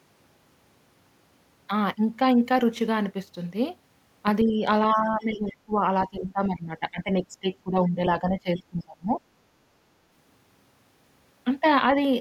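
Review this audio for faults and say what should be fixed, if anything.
Speech suppressed in double talk, likely from the echo canceller treating overlapping far-end and near-end sound as echo and attenuating both. The talker's speech dips slightly, by about 5 dB, from 4.44 to 4.65 s, then more deeply from 4.93 to 7.47 s (about 15 dB) and from 7.63 to 9.14 s (about 20 dB), sounding pushed back. Prevent it with a canceller that uses proper double-talk detection and gentler suppression.

The other side's voice leaking through, likely residual echo the canceller failed to remove from the microphone path, appears as two brief scraps from 5.51 to 5.56 s and from 8.57 to 8.62 s. Both sit about 25 dB below the talker's speech and are faint and clipped short. They arrive inside the suppressed stretches, where the canceller was struggling. Prevent it by improving echo-path adaptation and residual echo suppression, and by reducing loudspeaker-to-microphone coupling.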